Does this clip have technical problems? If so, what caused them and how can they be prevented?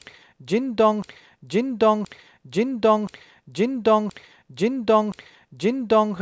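Yes, there's a system hang loop from 1.02 s to 6.14 s. The system froze while the audio hardware kept replaying its ring buffer, so the same 1.02 s chunk of speech repeats five times in a slow, once-a-second stutter, which points to a 16384-sample buffer. Keeping the audio thread unblocked and adding a watchdog that mutes on stalls would prevent it.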